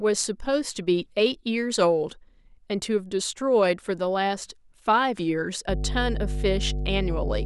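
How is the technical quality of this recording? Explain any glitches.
Mains hum spoils the final stretch of this speech recording. From 5.69 s to the end at 7.46 s, a ground loop or a nearby transformer is coupling the power line into the signal path, injecting a steady 50 Hz tone with a few low harmonics. It sits only a little below the speech level, so it isn't subtle: a constant low drone runs underneath the speech and muddies the bottom end until the clip stops.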